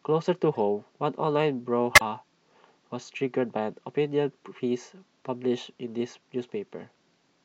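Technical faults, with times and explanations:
0.55 to 0.57 s and 1.95 to 2.01 s: corrupt frame decoded. A few damaged compressed frames were played as if valid, so misread gains and codes put energy at the wrong frequencies. The first is faint; the second is loud. Unlike a lost frame, the sound doesn't smear.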